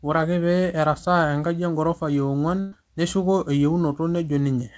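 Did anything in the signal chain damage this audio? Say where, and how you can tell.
Yes, a burst of packet loss on the network: from 2.60 to 2.75 s, about 120 ms is lost, the last sound is stretched and faded, then speech resumes further on.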